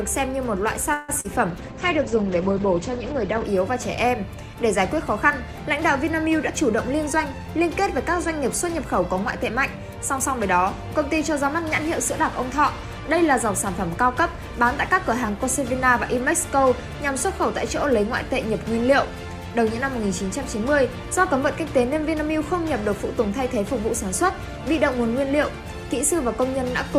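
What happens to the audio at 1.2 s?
At 1.20 to 1.26 s there is a short concealed packet loss: about 40 ms of the call never reached the decoder, and the receiver filled it by extending the preceding sound before blending back in. It is heard as a brief smear, and on a spectrogram as a narrow patch of frozen, smoothed texture.

Just before it, from 0.93 to 1.10 s, the sound stretches into a fading buzz or hiss for about 150 ms, then resumes where it left off. This is likely a call audio freeze, with delayed packets draining the jitter buffer. It appears as a decaying envelope in the waveform and as a horizontal smear on a spectrogram.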